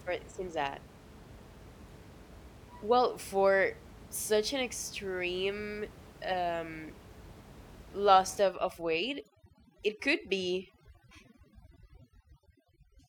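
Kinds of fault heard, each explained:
Overdone noise removal: from 8.41 s to the end of the clip, an overly aggressive noise reduction stage takes over. It pushes individual frequency bands down or out whenever they sit close to its estimate of the noise. The room noise, about 21 dB under the speech before this point, drops and breaks up into twinkling specks. The softer parts of the speech vanish with it.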